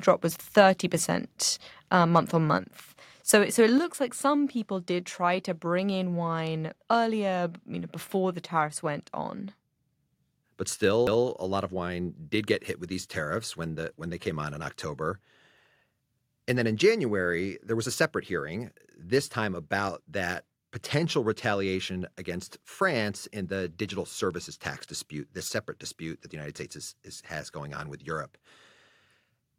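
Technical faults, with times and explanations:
2.15 s, microphone overload: a single loud peak in the speech runs about 1 dB past the converter's limit, with only a small share of samples flattened at the top. This gives a brief, harsh crackle, likely because the input volume was set too high for the converter.
3.78 s, microphone volume stepped down: speech and background drop together by about 4 dB in one sudden step, shortly after the overloaded peak. This is likely the call software lowering the microphone's input volume after it detected the clipping.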